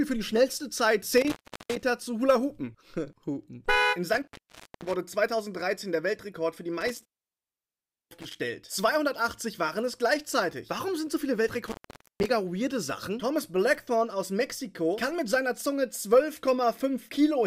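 An intermittent contact drops the signal four times: from 1.18 to 1.84 s, 4.14 to 4.96 s, 6.81 to 8.36 s, and 11.66 to 12.26 s. A loose plug or cable lets the connection break briefly, so the sound cuts out for about 0.38, 0.55, 1.06 and 0.48 s respectively. Each dropout has crackle at its edges as the contact scrapes open and closed, with faint hiss in the gap.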